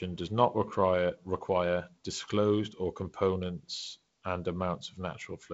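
Nothing stood out on listening to this speech, which comes through a G.722 wideband telephone path with its content reaching up to about 7.7 kHz.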